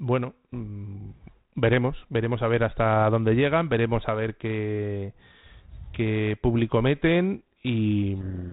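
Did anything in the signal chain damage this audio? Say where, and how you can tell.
Yes, at the codec stage: a codec payload misread from 8.20 s to the clip's end. The bit order of the G.726 code words is reversed, so the decoder applies wrong steps to its prediction and buries the speech in harsh distortion. Light 32 kbit/s G.726 coding damage is present throughout, but this distortion starts abruptly and is far rougher.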